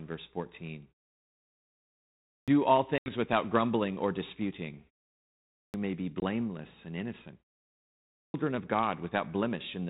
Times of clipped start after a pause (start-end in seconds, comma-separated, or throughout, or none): 2.25-2.48, 5.50-5.74, 8.11-8.34